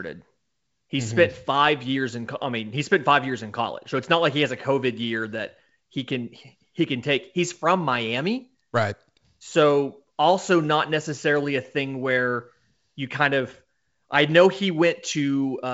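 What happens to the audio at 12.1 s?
At 12.1 s the speech runs on intact, carried by G.722 wideband telephone coding at 64 kbit/s with nothing above about 7.7 kHz.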